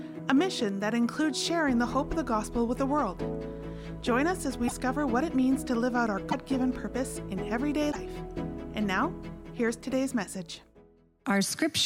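Brief chirps, noise bursts or short holes with a jump ahead at 4.67–4.72, 6.30–6.34 and 7.91–7.96 s, each about two 24 ms frames long, likely a broken MP3 bit reservoir, where missing frames leave later frames reading the wrong data.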